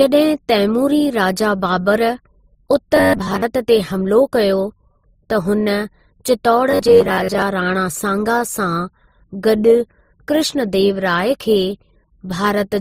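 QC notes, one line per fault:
throughout, transcoding between lossy codecs: layered, smeared artefacts with a hard spectrogram ceiling near 15.9 kHz, likely from MP3 at 43 kbit/s re-encoded as Opus at 24 kbit/s.
2.96–3.42 s (just before "ते हमिलो") and 6.71–7.42 s, robotic sound from repeated short buffers: a rigid 93.8 Hz metallic buzz. This likely comes from a block of about 10.7 ms replayed for most of each span, which shows as evenly spaced spectrogram striations and an identically repeating waveform cycle.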